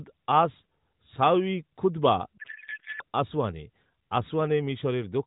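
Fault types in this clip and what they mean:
Codec payload misread: from 2.38 s to 3.03 s, right after "সাউঈ খুতবা", the decoder unpacks AMR frames with their bit fields shifted, because octet-aligned packing is being read as bandwidth-efficient. For about 0.65 s the speech turns into garbled warble and noise that barely tracks it. Unlike a dropout or concealed packet loss, sound keeps coming and nothing goes quiet, but it is nonsense. The surrounding speech is narrowband AMR, which fits the 12.2 kbps mode, with only light codec damage.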